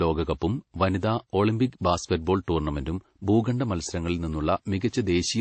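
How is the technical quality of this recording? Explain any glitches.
The quality is compromised by transcoding between lossy codecs throughout. The speech was likely encoded twice, with the smearing pointing to a low-rate MP3 stage followed by WMA. The second codec re-encodes the first one's artefacts, so both codecs' swirly, watery distortions sit together, and nothing is heard above 8.3 kHz.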